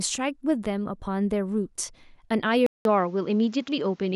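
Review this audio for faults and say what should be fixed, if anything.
At 2.66 s the speech drops out for about 0.19 s, then returns sounding duller to the end, with nothing above 7.6 kHz and a new faint noise floor roughly 40 dB down at an unchanged level. This is likely an input switched to a poorer device. A spectrogram shows a gap, then a hard ceiling at 7.6 kHz; the waveform shows a flat stretch. Locking the recording input to one device stops the system from changing microphones mid-take.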